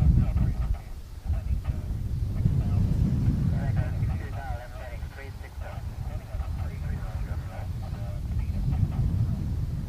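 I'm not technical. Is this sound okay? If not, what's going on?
Yes, nothing here points to a technical fault, so there's nothing to fix.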